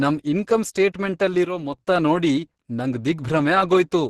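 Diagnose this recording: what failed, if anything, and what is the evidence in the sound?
Codec stage, likely Opus compression in hybrid mode: heavily damaged speech sounds hoarse and muffled throughout, with nothing above 12.1 kHz. It lacks the swirling spectral holes that MP3 leaves.

Likely one channel drops out, a wiring or routing fault: from 1.45 to 1.78 s, just before "ನೋಡಿ ನಂಗ್", the level falls abruptly by about 6 dB. The halving matches a mono sum losing one channel, not a fade.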